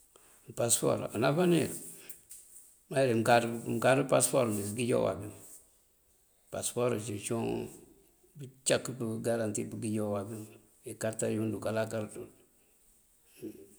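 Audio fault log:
No audible faults heard.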